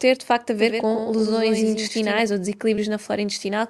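From 0.58 to 2.2 s, just after "de facto a", a second, slower capture path or misaligned edit likely mixed in a doubled audio track. One full-band copy, about 5 dB quieter, trails roughly a tenth of a second behind with no room colour, giving a hard slapback that starts and stops abruptly.

At 2.75 to 2.79 s, short concealed packet loss left about 20 ms missing from the Opus call stream. The decoder extended the preceding sound to fill the hole and then blended back into the real audio, producing a brief smear or wobble.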